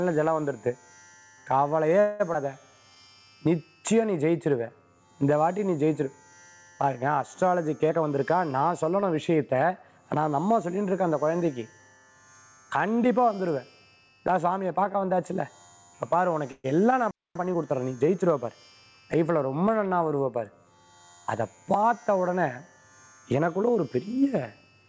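At 2.00 s the sound stops moving forward for about 0.2 s (197 ms) and is replaced by a fading continuation of its last moment. This is a call audio freeze, most likely packets held up in transit while the jitter buffer ran dry. The receiver extended the final sound until data returned, then resumed where it left off, so nothing is lost but a gap is inserted. On a spectrogram the last spectral shape smears sideways and fades. The waveform shows a decaying, repetitive texture. The same thing recurs at 16.51 s for about 0.13 s.

Right after, at 2.34 s, there is a skip ahead. Roughly a tenth of a second of audio is simply absent, and the two sides are butted together with only a few milliseconds of joining. The audio was discarded while later material was already queued, which pulls the delay back down. It sounds like a small jolt forward. A spectrogram shows an abrupt vertical seam where the spectral content changes without transition.

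From 2.71 to 3.20 s a jitter buffer slow-down plays the material at 83% speed with unchanged pitch, adding 95 ms by repeating single pitch periods or pause fragments to rebuild a reserve. Sounds are drawn out. The waveform shows near-identical cycles repeated in runs, and spectrogram harmonics stretch horizontally without shifting in frequency.

Jitter buffer speed-up occurs three times: 7.89 to 9.99 s at 109% speed, removing roughly 0.2 s; 21.41 to 22.38 s at 106%, roughly 70 ms; and 23.31 to 23.97 s at 107%, roughly 50 ms. Here the buffer held too much audio, so short pitch-period chunks were cut out repeatedly to reduce delay. The passages feel hurried at normal pitch. On a spectrogram, events sit closer together and harmonic tracks stay level. The waveform shows small splice points between cycles.

At 17.11 s the output goes fully silent for about 0.24 s: a playback stall, likely the player running out of data or its thread being blocked. 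It is a hard mid-flow dropout rather than a fade. The waveform drops to a flat, silent line, and the spectrogram shows a blank vertical band across all frequencies.

Immediately after, from 17.36 to 18.98 s, time-compressed catch-up plays the backlog at 1.15 times speed by excising small pieces and cross-fading them, keeping pitch normal. The result is rushed. The spectrogram shows compressed timing with slight smearing at the cross-fade points, while the waveform envelope looks squeezed without any frequency shift.

Across the clip the call path itself shows nothing above 8 kHz, consistent with a wideband call codec such as G.722, so the spectrogram has an empty band above that line throughout.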